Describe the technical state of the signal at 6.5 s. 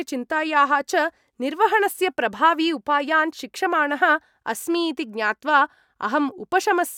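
At 6.5 s the signal is intact, with no audible fault at that point in the speech.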